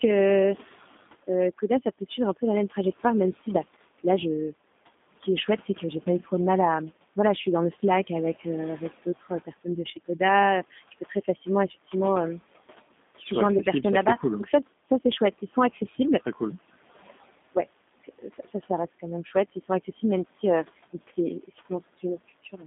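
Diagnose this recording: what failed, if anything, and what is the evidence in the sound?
G.729 codec damage runs throughout, a codec-stage fault. The speech is confined to roughly 200 Hz to 3.6 kHz and sounds rough and synthetic, which fits 8 kbit/s coding that rebuilds each 10 ms frame from a vocal-tract filter, pitch predictor and sparse pulses. The room noise, about 21 dB below the speech, warbles through it.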